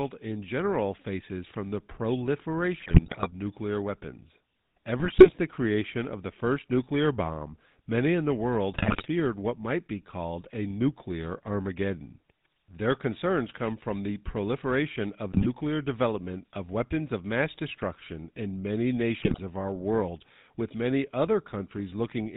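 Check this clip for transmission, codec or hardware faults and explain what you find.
Two problems here: the whole recording has been through the GSM full-rate codec, and on top of that there are five short bursts of GSM bit errors.

The GSM full-rate codec damage runs from start to finish and it's plainly audible. The codec rebuilds the speech from a vocal-tract model fed with a thinned-out, regularly spaced pulse excitation, so voiced sounds come out buzzy and gravelly, and nothing survives above 4 kHz, which leaves the speech dull and boxy. The character fits a 13 kbps full-rate phone link.

The GSM bit errors land at 2.8 to 3.28 s, 4.98 to 5.35 s, 8.72 to 9.07 s, 15.32 to 15.47 s and 19.2 to 19.39 s. In each, corrupted bits reached the decoder and scrambled its filter, pitch and gain values, so individual frames get the wrong spectral shape or a sudden level jump. You hear the speech break up into squawks, pops and gargling for those fractions of a second before the decoder settles again.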